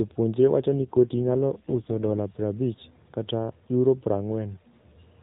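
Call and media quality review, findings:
AMR rate drop, 0.74 to 2.20 s. Radio link degraded; network pushed AMR-NB to a lower mode, sound consistent with 12.2 down to 4.75 kbps, bits shifted to error protection. Voice rougher, buzzier, more synthetic; same narrowband 4 kHz ceiling, no gap. Recovers at 2.20 s.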